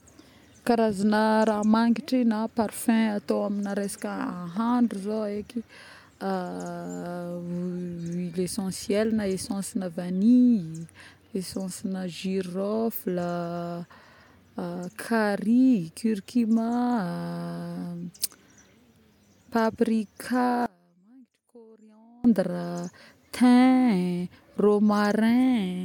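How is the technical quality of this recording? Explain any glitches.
There's one clear glitch, from 20.66 to 22.24 s, where the speech suddenly drops by about 30 dB and what's left sounds faint for about 1.6 seconds before snapping back. The likely cause is one channel inverted: with one stereo side flipped in polarity, everything common to both sides, which is most of a centred voice and its low end, cancels when they're summed to mono. You only hear the small difference between the channels.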